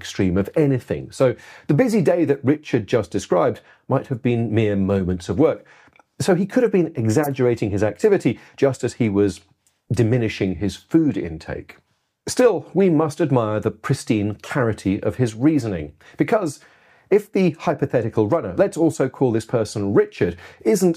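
At 7.23–7.27 s and again at 14.44–14.47 s, a corrupt frame was decoded. Damaged bits in a single compressed frame sent energy to the wrong frequencies, producing a brief chirp, squeak, blip or burst of noise, loud at first and quieter the second time. A lost frame leaves a gap or smeared repeat, but this inserts foreign sound.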